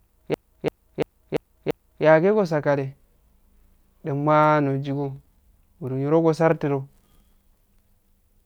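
A system hang loop from 0.34 to 2.05 s repeats one 341 ms slice of speech five times, a machine-gun stutter that fits a 16384-sample buffer cycling while the system froze.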